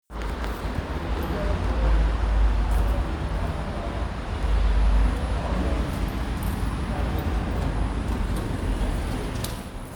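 Nothing goes wrong here at any point; the sound carries on steadily with no technical trouble to point out.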